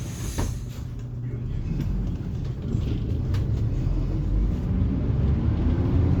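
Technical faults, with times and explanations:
Throughout: Bluetooth LC3 compression, likely the cause of the grainy, breathy hiss across the upper band, where noise fill stands in for discarded detail. Unlike plain bandwidth limiting, the top still reaches 20.1 kHz but sounds grainy, which fits 10 ms frames near 48 kbps.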